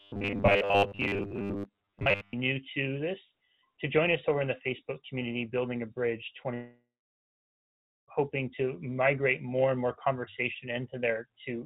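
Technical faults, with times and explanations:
0.01–2.33 s, robotic sound from repeated short buffers: a rigid, metallic buzz at 100 Hz. This is likely caused by audio arriving too seldom, so a playback fragment of about 10 ms is looped and most of the real audio is skipped.
6.54–8.09 s, long network dropout: the last sound is drawn out into a fading buzz or hiss, then about 1.17 s of silence follows before the sound returns further on. This is likely a gap of about 1.54 s where no audio arrived and the receiver filled it with concealment.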